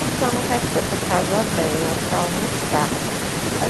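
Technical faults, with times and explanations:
Nothing stood out on listening to this speech recording.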